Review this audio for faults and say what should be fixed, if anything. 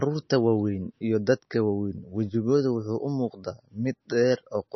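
Throughout the speech, heavy MP3 compression likely starved the encoder of bits, so it cut everything above 5.9 kHz and let weak frequency lines flicker between frames. The speech sounds dull and watery, with swirly, chirping s sounds, which points to a bitrate near 27 kbps. Encoding at a much higher bitrate, or with a codec built for low-rate speech, would prevent it.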